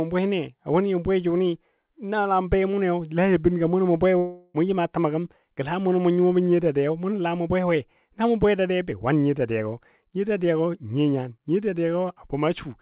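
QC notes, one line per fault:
4.18–4.56 s, long network dropout: the speech is replaced for 0.38 s by a fading, buzzy smear of the last sound that never quite goes silent, likely lost packets covered by concealment. The missing stretch never comes back, and the 4 kHz-limited call audio simply resumes.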